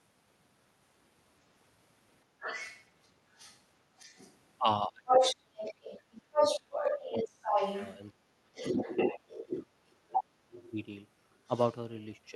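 From 2.4 to 4.39 s a second voice sits just under the speech, only a little quieter than it: other side's voice leaking through, likely loudspeaker echo that the echo canceller failed to remove from the microphone. From 5.06 to 10.71 s that second voice returns, now louder than the talker. Over the same stretch the talker's speech drops sharply, by roughly 25 dB, in pieces at 4.88 to 7.58, 8.26 to 8.58 and 9.12 to 10.36 s. This is speech suppressed in double talk, likely the canceller turning down both sides while they overlap. From 11.35 to 11.78 s the other side leaks through once more, this time faint.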